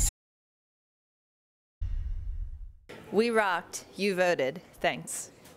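At 0.09 s the sound cuts off abruptly and gives way to dead, total silence, with not even a trace of room tone underneath, until it resumes mid-flow at 1.81 s. This is an audio dropout to silence lasting about 1.72 s, and whatever occurred in that stretch is simply missing. The likely cause is a momentary loss of the input signal, such as a disconnect or mute, while recording carried on writing silence.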